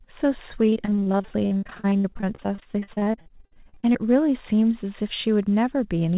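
From 0.66 to 4.01 s there is repeated packet loss (robotic sound). Dozens of dropouts, up to 65 ms, are patched by extending prior sound, so the speech turns choppy.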